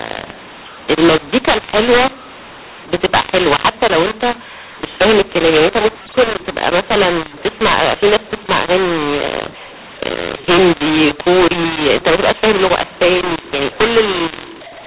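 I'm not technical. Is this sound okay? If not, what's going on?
No. Throughout, the speech sounds harsh and gritty, and the gaps between phrases fill with hiss instead of going quiet. This is mu-law and A-law mixed up: the telephone audio was stored in the mu-law format but played back as A-law, so loud and soft moments come out at the wrong strengths.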